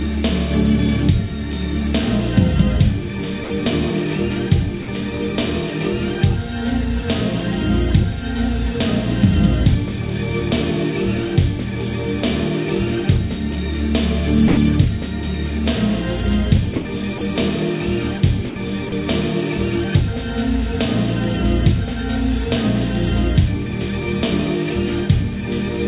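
A recording of everyday sounds carried over a narrowband call line, with nothing above 4 kHz, which fits G.711 A-law at 64 kbps. At 3.44, 4.82, 14.48, 16.76, 17.18, 18.5 and 18.89 s the sound briefly gives way to flat, steady comfort noise for 30 to 90 ms. This is likely sound dropped by the voice detector, which mistook the sound for background. On a spectrogram each gap is a thin, featureless vertical band; on the waveform it is a short, low, even stretch.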